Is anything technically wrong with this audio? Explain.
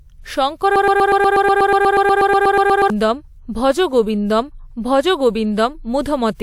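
Yes. From 0.76 to 2.90 s the speech turns into a broken-record loop: a 121 ms fragment repeats exactly, back to back, 18 times. The player, encoder or stream likely stalled and kept resending its last fragment, so the speech for that span is lost.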